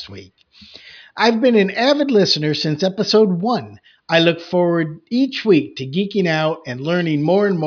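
No technical faults are audible.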